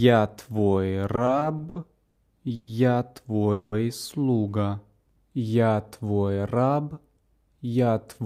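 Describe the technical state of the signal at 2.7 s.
At 2.7 s the signal is just coming out of a call audio freeze spanning 2.55 to 2.69 s. The last sound is stretched into a fading buzz for about 120 ms, likely because delayed packets emptied the jitter buffer. Unlike a dropout, nothing is lost: playback resumes exactly where it stopped, just 120 ms later.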